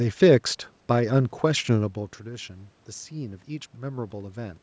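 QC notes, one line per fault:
No faults heard in this speech clip.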